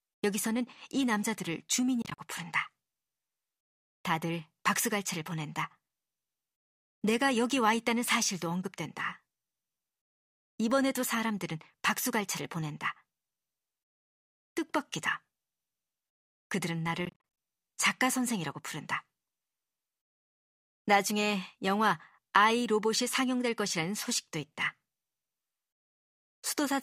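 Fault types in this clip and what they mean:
Bluetooth dropout: packets likely failed to reach the headphones in time and were discarded, so the speech blanks out in short bursts, each gap up to 40 ms, scattered over 2.02–2.18 s and 17.05–17.38 s. The speech then resumes as though it had continued underneath.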